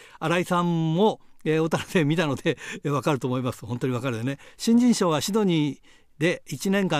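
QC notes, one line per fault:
No fault to note.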